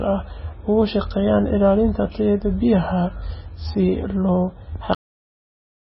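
Speech runs throughout with a watery, swirling texture and nothing above 5.6 kHz, likely heavy MP3 compression at a low bitrate near 17 kbps; the flickering distinguishes it from a plain low-pass filter. At 4.95 s a cut-off end drops the speech mid-sound straight into digital silence, with no decay to suggest a natural fade.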